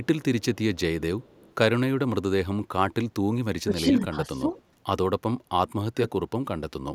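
From 1.22 to 1.52 s a very faint copy of the speech trails the original by 234 ms, far below the direct sound. This is an echo leak, likely from a loudspeaker-side echo canceller letting part of its microphone pickup slip back.

From 3.64 to 3.9 s the speech sinks sharply, roughly 15 dB at its deepest. A milder dip follows from 4.44 to 4.53 s. Both are speech suppressed in double talk, likely the canceller turning down this talker while the far side spoke too.

From 4.55 to 4.62 s the same 234 ms echo leak briefly returns, slightly stronger than before. It is likely the same residual echo escaping the canceller.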